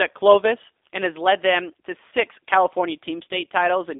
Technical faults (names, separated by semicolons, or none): G.729 codec; VoIP packet loss concealed by the speech codec